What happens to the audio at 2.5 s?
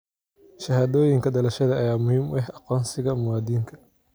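Nothing goes wrong at 2.5 s: the speech runs through that moment intact, with no dropout, click or distortion.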